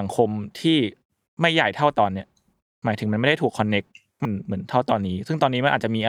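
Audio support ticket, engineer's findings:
Damaged data in a compressed stream: short glitches at 0.00 s and 4.25 s. Decoder side, fed bad frames. It misreads the corrupted bytes, loses frame sync, then hunts for the next valid header before the speech picks up.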